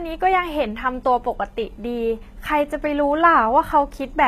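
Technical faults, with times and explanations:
Throughout: HE-AAC compression, likely, at what sounds like a rate near 20 kbps. The treble is rebuilt by copying lower bands upward, so s sounds come out gritty and metallic, with harmonics mismatched at the crossover and nothing above about 14.9 kHz.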